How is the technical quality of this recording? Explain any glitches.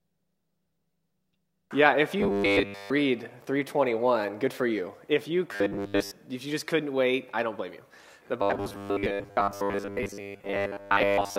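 The recording has a recurring glitch: robotic sound from repeated short buffers, at 2.19 to 2.91 s, 5.52 to 6.11 s, and from 8.42 s to the end. The sound turns into a rigid, metallic buzz pitched at 100 Hz. The likely cause is new audio arriving too seldom, so the same 10 ms slice gets replayed to fill the gaps. Most of the original material is skipped. The loop rate sets the fixed buzz.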